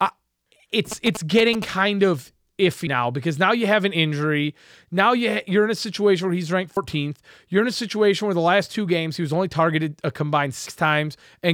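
Speech recording with GSM signalling bursts from 0.92 to 1.64 s: a galloping pattern of ticks and short buzzes at a 217 Hz repetition rate, sitting roughly 10 dB below the speech, produced when a nearby 2G phone's signalling transmissions are rectified by the audio circuitry. At 2.87, 6.77 and 10.67 s the audio skips abruptly, each time dropping roughly a tenth of a second with the two sides butted together. This is likely audio missing between chunks, with a recorder or processor working in 4-second blocks and losing material at each changeover.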